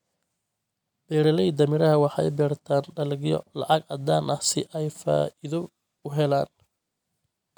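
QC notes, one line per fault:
No faults heard in this clip.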